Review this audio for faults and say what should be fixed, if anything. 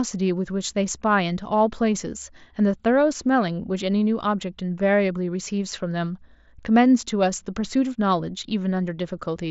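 Nothing here needs fixing: the speech comes over a Bluetooth mSBC headset link, which leaves nothing above about 7.7 kHz and a light grain on the louder moments, and no fault can be heard on top of that.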